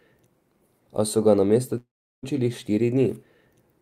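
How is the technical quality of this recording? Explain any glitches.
The speech has one glitch, a long network dropout from 1.77 to 2.25 s. The last sound smears into a fading buzz or hiss, then about 370 ms of near-silence follows. The speech resumes with around 460 ms of it missing, likely because packets stopped arriving. Unlike a brief packet-loss click, the concealment runs out, and the jump on return shows that the audio was lost rather than paused.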